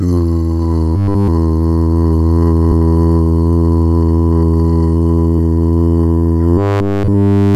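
From 0.96 to 1.28 s, and again from 6.58 s to 7.55 s, the sound turns robotic: a rigid, metallic buzz pitched at 100 Hz takes over completely. This is robotic sound from repeated short buffers, likely from a roughly 10 ms chunk looped while fresh audio arrived too late. Unlike a stutter, where audible fragments repeat, or a dropout, which falls silent, this produces a steady tone.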